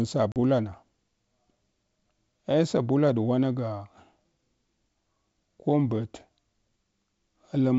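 Packet loss on an ADPCM call hits the speech from 0.32 to 0.37 s: about two packets, 40 ms, drop out as a hard-edged silent gap. The decoder's predictor and step size lose track of the sender's, so the speech resumes slightly distorted before settling.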